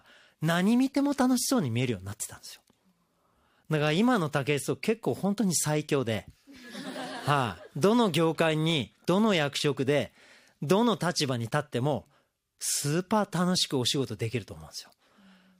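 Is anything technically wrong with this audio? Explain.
No, nothing technically wrong can be heard in this speech recording, and the signal holds steady without any audible defect.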